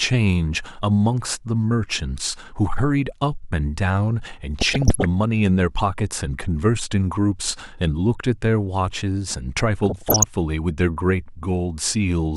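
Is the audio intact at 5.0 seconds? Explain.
No. DAB burbling runs from 4.59 to 5.05 s, so 5.0 s falls near its end. With weak reception, bit errors slip past the error correction into the MP2 audio data: corrupted samples put short blips of noise in single sub-bands, and corrupted scale factors make sub-bands jump in level for up to a frame. That lays short burbling blips of noise over the speech. The density of the disturbance fits about twenty damaged frames and a bit error rate of somewhat under one percent.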